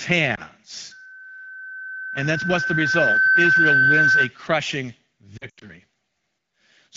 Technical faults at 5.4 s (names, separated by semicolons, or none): lost AMR speech frames